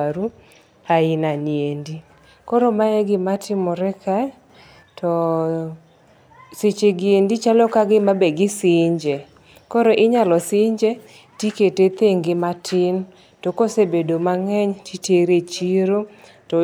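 From 4.50 to 4.83 s the speech and its background noise abruptly step up together by about 4 dB: a sudden gain jump, likely a digital gain change applied without a ramp.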